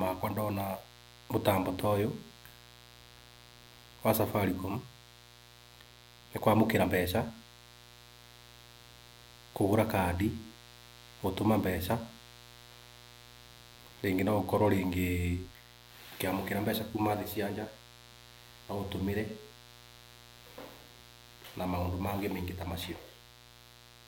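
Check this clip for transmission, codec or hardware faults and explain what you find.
A mains buzz runs under the speech from start to finish. It sits at about 25 dB below the speech. The buzz is built on 60 Hz mains. A dimmer, rectifier or poor shielding lets sharp switching spikes into the signal, two per mains cycle. Those spikes carry a dense stack of 60 Hz harmonics up into the kilohertz range. The result is a steady, raspy buzz rather than a smooth hum.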